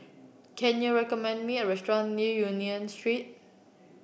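No technical faults can be heard anywhere in this speech recording. There is nothing here to place on a timeline or trace back to a cause.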